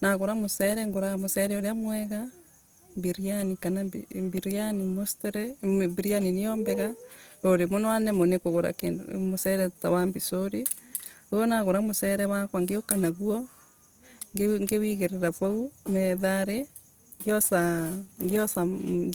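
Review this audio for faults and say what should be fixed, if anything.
Throughout the speech, vowels and consonants sound grainy and rough, with noisy texture in the upper range. This is likely Opus compression in its music (CELT) mode, at a rate that points to about 24 kbps. A spectrogram shows upper bands filled with smeared noise rather than clean gaps, extending to about 20.2 kHz. Encoding at a higher bitrate from an uncompressed source would prevent it.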